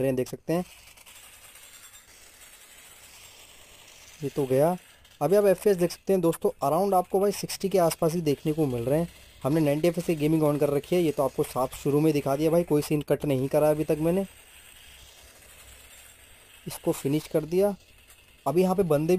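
A metallic fizz follows the sound throughout. This is imaging from sample-and-hold upsampling: unsmoothed repeated samples mirror the spectrum into 11 to 22 kHz, about 24 dB down, consistent with a 22 kHz to 44.1 kHz rate change.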